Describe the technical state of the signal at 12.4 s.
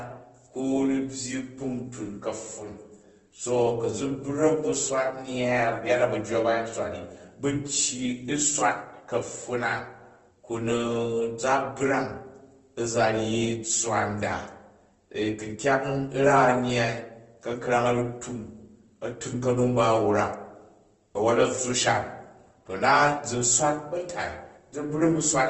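At 12.4 s the speech carries the same damage present across the whole clip, likely Opus compression at a low rate of around 16 kbps in its CELT music mode: nothing above 8.2 kHz, and band-filled texture that makes voiced sounds noisy, rough and grainy.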